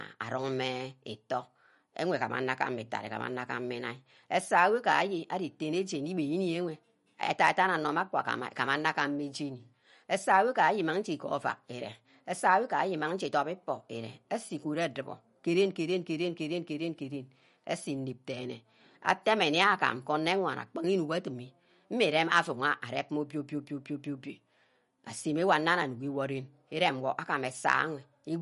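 From start to end, the speech has plainly audible codec damage, with nothing above 11.2 kHz. The likely cause is MP3 compression at a low bitrate, which fits roughly 48 kbps. Short of bits, the encoder cuts the treble at a fixed frequency and drops weak spectral lines, which come and go between frames. The result is a watery, swirling texture, metallic chirping on s sounds, and softened, smeared attacks.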